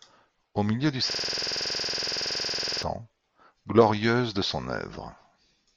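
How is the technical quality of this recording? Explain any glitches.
The recording has one glitch. A system hang loop from 1.11 to 2.83 s, just after "milieu du", repeats one 46 ms slice of buffer dozens of times, fitting a 2048-sample buffer, producing a rapid 21.5 Hz stuttering buzz.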